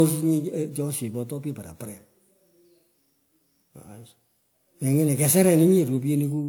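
From start to end, the speech has a swirly, hollow, smeared texture, with consonant attacks softened. Yet content reaches up to about 20.1 kHz, so this is not the dulling of a single low-bitrate encode. The degradation is more than one pass at that quality would produce, which points to generation loss, likely from encoding about three times at a setting that fits 128 kbit/s WMA, each pass requantising on a shifted frame grid.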